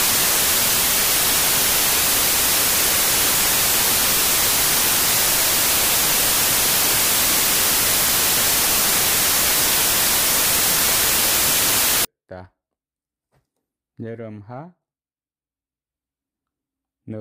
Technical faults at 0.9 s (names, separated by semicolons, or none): samples built from the wrong bytes